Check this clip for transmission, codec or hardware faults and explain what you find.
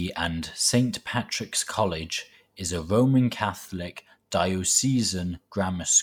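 I find no faults in this clip.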